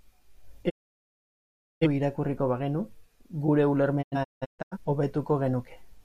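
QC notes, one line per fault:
0.68–1.87 s: digital broadcast dropout. Speech fades out within about 20 ms and stays silent for about 1.1 s. The receiver stopped getting good frames and muted until they returned. Whatever was sent in that gap is gone.
4.01–4.77 s: digital broadcast dropout, in several short holes. About 0.47 s is lost in total, and the longest hole lasts 0.17 s. Each hole has a quick fade. Frames failed intermittently, so the sound keeps cutting in and out.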